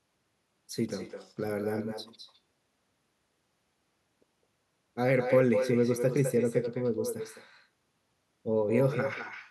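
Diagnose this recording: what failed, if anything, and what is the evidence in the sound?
Call processing failed: an echo with no canceller runs through the whole speech recording. Every syllable returns roughly a fifth of a second later, about 7 dB quieter and thinner, because the far end's loudspeaker feeds its microphone unchecked. A spectrogram shows each burst repeated as a fainter, delayed ghost.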